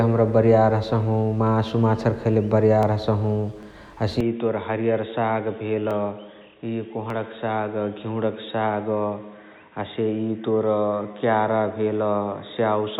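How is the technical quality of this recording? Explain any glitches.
The recording has two kinds of fault: four isolated clicks between about 2.8 and 7.1 seconds, and an abrupt drop in bandwidth and level that lasts from just past four seconds to the end.

Dropped samples: sharp single clicks occur at 2.83, 3.63, 5.91 and 7.10 s. Each is the likely result of the stream losing a tiny run of samples, well under a millisecond, so the waveform jumps straight to a later value. The gap is too brief to remove any audible sound, but the discontinuity registers as a crisp tick and a thin vertical line across the spectrum.

Input switched to a poorer device: at 4.21 s the speech abruptly turns dull and boxy and stays that way to the end. The band narrows, the level falls by about 5 dB, and a new noise floor appears roughly 50 dB below the signal. The changeover is seamless, with no gap. This is likely the capture path switching mid-recording to a narrower-band microphone or a headset call profile.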